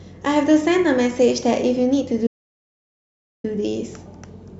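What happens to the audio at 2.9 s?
At 2.9 s the speech sits inside an audio dropout to silence from 2.27 to 3.44 s: the input was likely lost while zeros kept being written, leaving about 1.17 s of dead silence.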